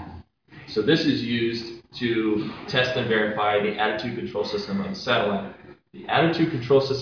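Nothing in the audio stood out as a technical problem on listening.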